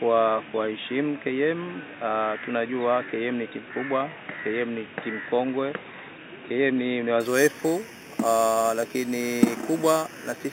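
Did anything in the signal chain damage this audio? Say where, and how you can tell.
Yes. From 7.20 s to the end at 10.52 s the audio shows imaging from sample-and-hold upsampling, introduced at a sample-rate conversion stage where 8 kHz material was raised to 44.1 kHz by repeating samples without an interpolation filter. The tell is a bright metallic fizz riding on the sound, about 16 dB below it, rising and falling with its level. The lowest mirrored copy occupies 4 kHz to 8 kHz and moves opposite to the pitch.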